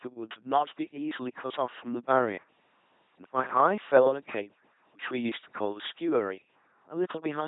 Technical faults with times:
0.00-7.48 LPC-10 vocoder

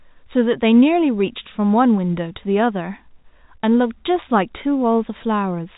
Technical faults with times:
none

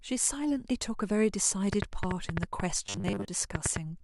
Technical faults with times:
1.73-3.77 train of clicks
2.86-3.28 robotic sound from repeated short buffers

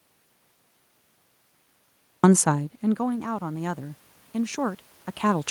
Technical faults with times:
2.43-5.51 automatic gain rising

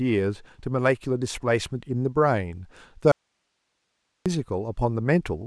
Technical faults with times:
3.12-4.26 audio dropout to a faint residue

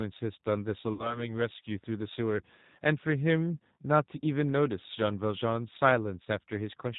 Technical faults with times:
0.00-6.98 G.729 codec
0.93-1.29 VoIP packet loss concealed by the speech codec

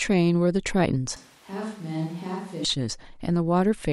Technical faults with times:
1.16-2.65 switch to a distant microphone

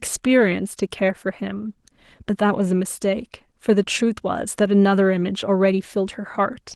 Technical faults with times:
none

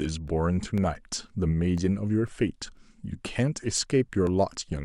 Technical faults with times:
0.28-4.77 periodic USB or driver dropouts

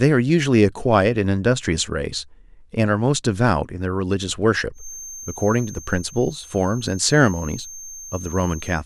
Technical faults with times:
4.72-8.85 feedback whistle

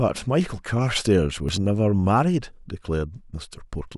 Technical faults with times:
1.49 dropped buffer (overrun)
2.66 dropped buffer (overrun)

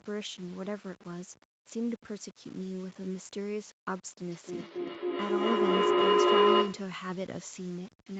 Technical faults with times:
0.00-8.19 low bit depth without dither
4.30-7.00 feedback howl

